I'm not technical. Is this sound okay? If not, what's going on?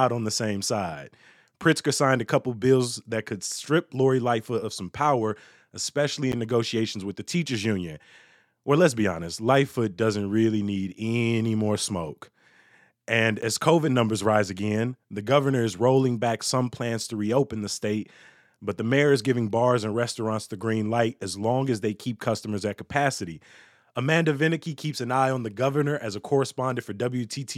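No, there are two tiny glitches. Each is a block of digital silence: for about 10 ms the audio drops to silence and jumps straight back, so you hear a quick tick. The first is at 6.32 s, right after "of some power especially" and before "negotiations with the teachers", and the second is at 13.42 s. The likely cause is that the software didn't hand over its next chunk of audio in time.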